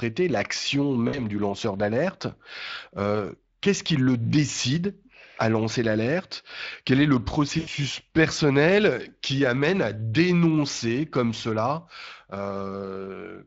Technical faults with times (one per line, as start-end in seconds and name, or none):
0.00-13.46 Speex codec
1.07-1.26 VoIP packet loss concealed by the speech codec
7.59-7.69 VoIP packet loss concealed by the speech codec